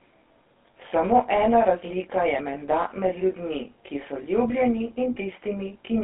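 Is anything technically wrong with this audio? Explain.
Yes, two faults run through the whole speech clip.

Channel delay (comb filtering) is present from start to finish. One channel arrives around 20 ms behind the other, and when the two are summed to mono, content common to both cancels at regularly repeating frequencies. The first notch falls near 20 Hz, and the notches repeat only tens of hertz apart, which gives the speech a rough, slightly doubled colour. On a spectrogram this appears as fine, evenly spaced horizontal dark stripes that stay fixed in frequency.

GSM full-rate codec damage is also present throughout and is plainly audible. The sound fits a 13 kbps GSM full-rate stream. This codec rebuilds speech from a vocal-tract model driven by sparse, regularly spaced pulses, which produces a buzzy, gravelly roughness. The band is limited to a telephone line, about 250 Hz to 3.6 kHz. 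On a spectrogram, all energy stops sharply near 3.8 kHz and the lowest frequencies are thinned out.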